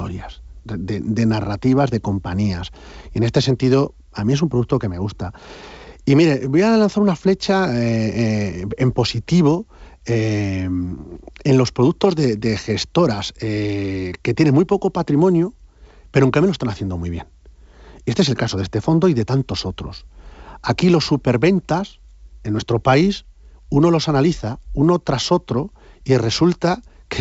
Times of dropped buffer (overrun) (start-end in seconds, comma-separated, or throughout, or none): none